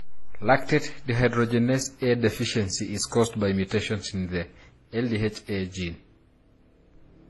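Transcoding between lossy codecs runs through the whole speech clip: nothing is present above 11.8 kHz, and several kinds of coding artefact sound at once. The likely cause is a chain of low-rate codecs, something like MP3 into HE-AAC into WMA. Each later stage spent its bits re-encoding the damage from the one before and added its own, while the lowest cut-off in the chain stayed in place.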